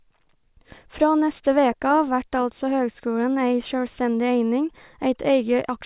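Listening to this speech recording, nothing stood out as a technical problem at any point.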